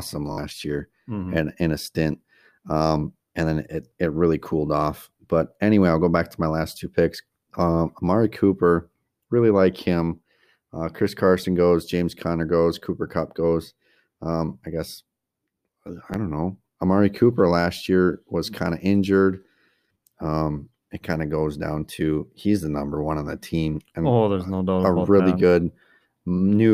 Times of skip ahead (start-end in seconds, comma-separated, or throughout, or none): none